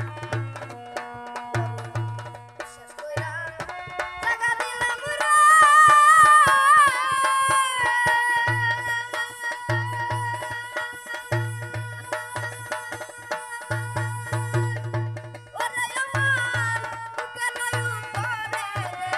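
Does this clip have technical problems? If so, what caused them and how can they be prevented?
Yes. From 5.00 to 6.09 s, channel delay (comb filtering) dulls the top end. One channel lags by about a sample, so the mono sum cancels at around 20 kHz, which shows as a darkened top band on the spectrogram. Keep both channels sample-aligned before summing them to mono.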